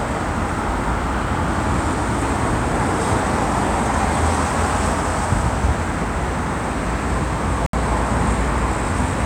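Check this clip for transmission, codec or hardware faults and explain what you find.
One fault is present, a Bluetooth dropout. From 7.66 to 7.74 s the sound cuts out for about 70 ms, then resumes further along, as if it had kept playing. The likely cause is packets arriving too late and being dropped, consistent with roughly three lost packets.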